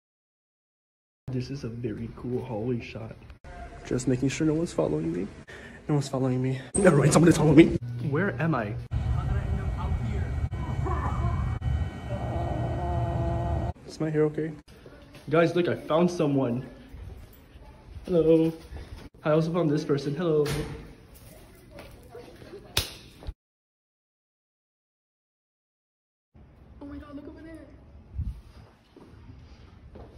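The clip opens with digital silence until 1.28 s. Then the sound appears abruptly, already in progress. This is a cut-off start: capture began late, partway through a sound. There is no natural attack or fade-in, so the entry feels chopped.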